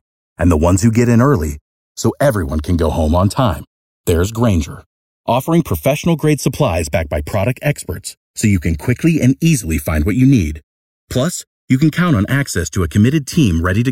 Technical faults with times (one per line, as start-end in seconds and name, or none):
0.00-13.91 channels drifting apart